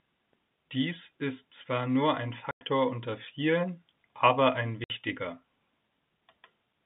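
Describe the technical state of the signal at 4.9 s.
At 4.9 s the signal is emerging from packet loss filled with silence. Packets went missing and the receiver played silence for 60 ms, from 4.84 to 4.90 s, right after "unter vielen aber ein", consistent with six 10 ms packets. The speech drops into a hard-edged hole.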